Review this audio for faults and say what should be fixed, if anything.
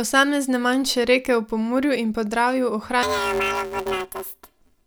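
From 3.03 s to the end at 4.86 s, the speech turns into a robotic buzz at about 172 Hz with no clear octave shift. This is planar audio read as interleaved. Each 5.8 ms block, which fits a 256-sample block, holds all left samples then all right samples but is read as alternating pairs, so each channel plays back in quick double-speed bursts. To prevent it, match the reader's channel layout flag to the planar or interleaved format the source actually delivers.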